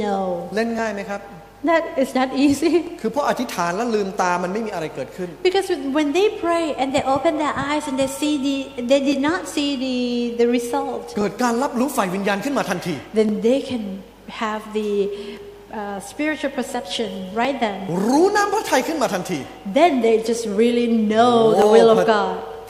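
Regular clicks recur every 2.08 s, about ten in all, from 0.79 s to 21.62 s. These are likely clock drift buffer slips, with a few dozen samples dropped or repeated each time.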